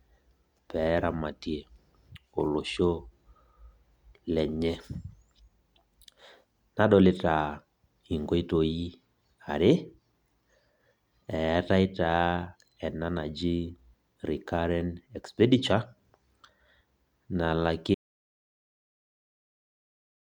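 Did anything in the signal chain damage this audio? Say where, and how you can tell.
Yes. At 17.95 s the speech cuts to total silence with no room tone until the end. This audio dropout to silence likely means the input connection failed while recording continued.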